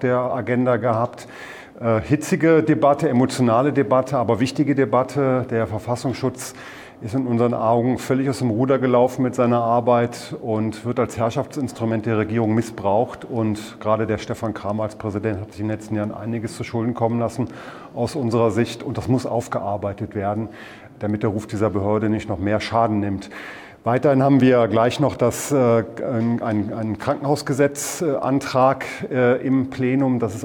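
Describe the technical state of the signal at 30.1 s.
At 30.1 s the signal is intact, with no audible fault at that moment.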